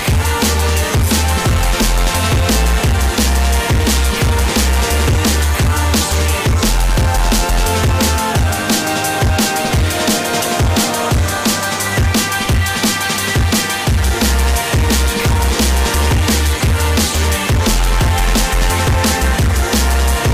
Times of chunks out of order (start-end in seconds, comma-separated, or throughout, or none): none